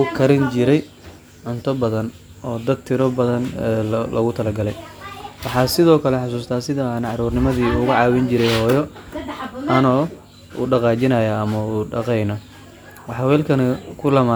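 No technical faults turn up at any point in the recording, so there is nothing to describe in time order.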